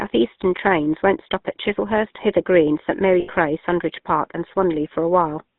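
A buzzy, gravelly roughness runs through the whole speech clip, and the sound is boxed into a narrow band of roughly 150 Hz to 3.7 kHz. That is the GSM full-rate codec. It models the vocal tract and feeds it a sparse pulse excitation, which fits a 13 kbps coder, and the damage is plainly audible.

From 3.2 to 3.3 s the sound freezes into a rough, metallic ring. These are lost GSM frames. For about 80 ms, which fits four missing frames, the decoder repeated the last good frame's settings.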